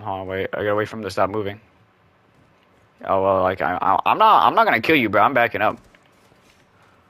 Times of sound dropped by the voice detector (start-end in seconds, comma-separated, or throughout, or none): none